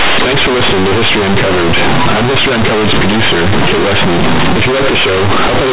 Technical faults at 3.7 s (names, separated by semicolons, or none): companded audio read as linear